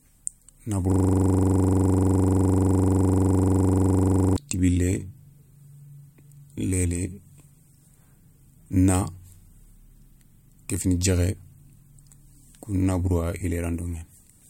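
Speech, with a system hang loop from 0.92 s to 4.36 s. For about three and a half seconds the same 42.67 ms scrap of audio repeats back to back, roughly 80 times, which gives a hard rattling stutter at 23.4 Hz instead of speech. That's what you hear when the machine or driver freezes while the audio hardware keeps replaying its ring buffer, and the loop length fits a 2048-sample buffer.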